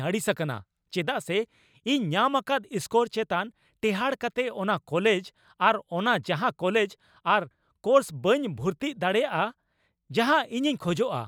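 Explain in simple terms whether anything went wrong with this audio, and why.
Nothing went wrong with this audio, and there's no fault to explain.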